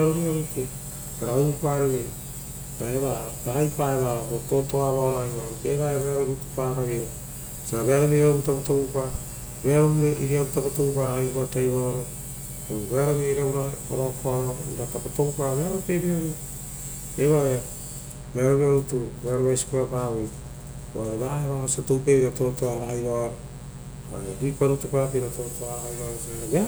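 Mains buzz runs throughout the speech, sitting roughly 20 dB below it. Sharp switching spikes from 60 Hz mains leaked into the signal path twice per cycle, spreading harmonics up to several kHz and producing a steady, raspy buzz under every phrase.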